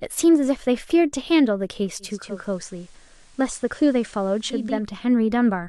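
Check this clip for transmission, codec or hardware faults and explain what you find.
There's one fault: the receiver drops from digital to analogue and back partway through. From 1.99 s to 4.91 s you hear a digital radio blending to analogue. The hybrid receiver lost its digital signal and cross-faded, over about half a second (478 ms), to the station's FM simulcast, then faded back. On the FM side, hiss rises to roughly 35 dB under the speech and the level drops about 2 dB.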